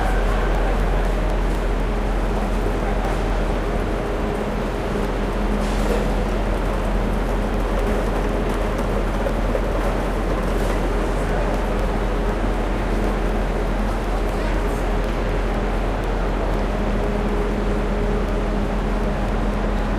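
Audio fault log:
0.30 to 19.79 s, periodic USB or driver dropouts: A steady tick sounds every 0.25 s, four times a second, around seventy times in all. Each tick is a gap of roughly a millisecond where the sound falls to silence. Something keeps stalling the USB bus or the audio driver on a fixed schedule, so samples go missing. The sudden drop and return make a click. The even spacing gives it a mechanical rhythm.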